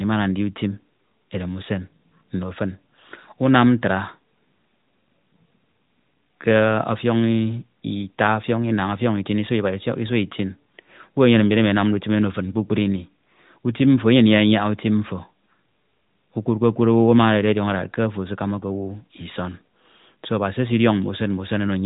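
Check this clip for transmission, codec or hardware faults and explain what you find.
No faults found in this speech clip.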